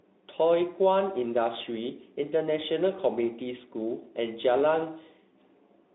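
The speech contains no audible technical faults.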